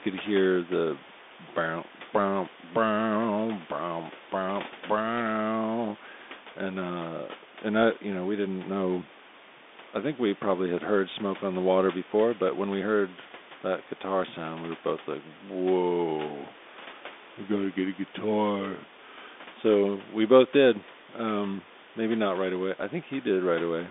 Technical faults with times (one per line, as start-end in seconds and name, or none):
0.00-23.91 Bluetooth CVSD headset codec